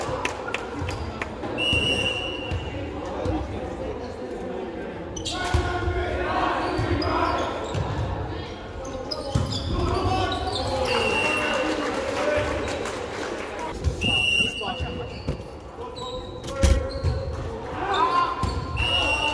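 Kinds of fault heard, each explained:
No technical faults can be heard anywhere in the signal.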